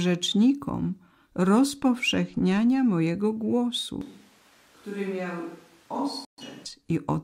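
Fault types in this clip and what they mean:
Switch to a distant microphone: The close microphone's feed most likely failed, so the recording fell back to a microphone further from the talker. From 4.01 to 6.66 s the speech turns abruptly roomy and hollow, thinner in the bass and roughly 10 dB quieter, with background room noise rising to only about 25 dB below the speech. Both the change over and the return to the close sound are sudden, with no crossfade.
Digital broadcast dropout: The receiver stopped getting usable data, so it muted the output until valid frames arrived again. Between 6.25 and 6.43 s, inside the distant-microphone stretch, the sound fades to silence within about 3 ms and then comes back. The hole corresponds to roughly 128 ms of missing programme, which fits about three lost frames. Whatever was sent during that gap is simply gone rather than delayed.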